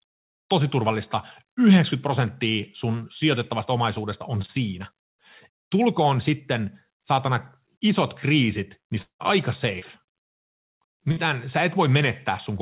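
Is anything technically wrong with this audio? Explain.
Yes. The speech has four interruptions, heard through a narrowband call path with nothing above 4 kHz, which fits G.711 mu-law at 64 kbps.

Short concealed packet loss at 4.42–4.46 s and 9.79–9.84 s: about 20 ms never arrived, and the receiver extended the preceding sound, giving a brief smear. A spectrogram shows a smoothed, continued stretch there.

At 9.02–9.21 s the sound stretches into a fading buzz or hiss, then about 110 ms of flat silence, before resuming with a stretch missing. This is likely a long network dropout. The waveform decays to a flat line.

Burst of packet loss at 11.11–11.19 s: about 60 ms went missing and the last sound was continued at a decaying level before the audio resumed. The waveform shows a shrinking, repetitive stretch.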